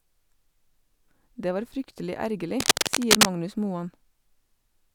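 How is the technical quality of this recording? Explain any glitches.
One glitch stands out in this speech recording. From 2.60 to 3.26 s, a dense, uneven scratching and rustling sits on top of the speech, a few decibels louder than it. This is cable scratch noise, likely from a worn cable or connector being moved. Its contact resistance jumps about rapidly and injects bursts of noise into the signal.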